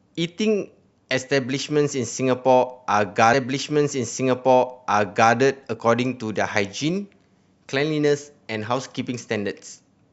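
At 3.33 s the speech jumps back and replays a stretch it has already played, running through to 5.33 s, so about 2 s of the programme is heard twice. That's a stream segment repeated: the player ended up fetching or queuing the same chunk of the stream a second time and played it again in sequence. You hear a small blip at the jump back, then a straight replay of the previous two seconds.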